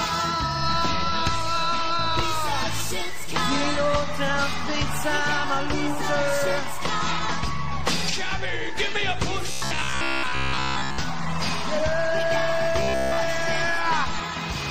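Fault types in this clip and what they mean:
Robotic sound from repeated short buffers: a stiff metallic buzz near 66.8 Hz is heard from 9.51 to 11.0 s and 12.80 to 13.18 s, likely a 15 ms chunk replayed while new audio arrived late, covering most of the first stretch and all of the second.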